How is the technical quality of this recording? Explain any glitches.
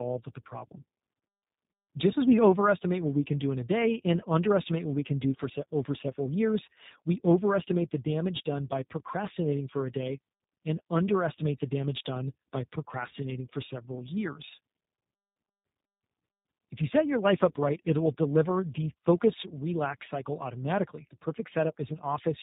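The quality is poor throughout, with one fault. Tandem speech coding runs the whole way: the speech went through two low-rate speech codecs in a row, sounding like iLBC handing over to G.729A, the second re-coding the first's damaged output. This leaves it rough, muffled and warbly. A spectrogram shows nothing above 3.8 kHz and blurred, smeared formant bands.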